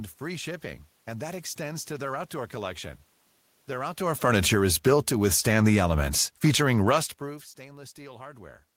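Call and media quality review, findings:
Automatic gain falling, 4.02–5.27 s: speech and room noise drop together by about 10 dB, so this is not just the talker moving around 4 s. The AGC judged the input too loud or its background noise too strong and lowered gain gradually. Recurs 6.17–7.63 s, about 3 dB, with the same mechanism.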